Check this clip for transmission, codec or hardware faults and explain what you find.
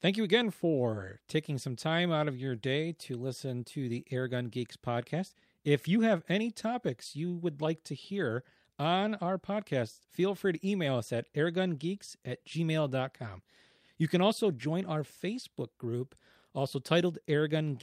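Two related timing faults run through this speech clip, both caused by mismatched clocks between the two ends of the link.

Clock drift between sender and receiver persists throughout. The sender's clock runs roughly 5 percent fast, so the receiver's buffer keeps overfilling, producing small recurring timing hiccups.

Repeated timing corrections occur from 0.07 to 17.48 s. The receiver keeps cutting short pieces to absorb the 105 percent sender rate, heard, if at all, as slight, unevenly spaced hiccups or an unsteady tempo.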